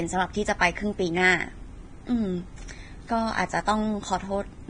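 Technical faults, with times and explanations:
Throughout, Vorbis compression: the speech stops dead at 9.7 kHz, and what treble remains is hissy and grainy, with harsh tonal texture and smeared onsets. This is likely heavy Vorbis coding, consistent with roughly 23 kbps, where coarse residue quantisation replaces fine detail with noise.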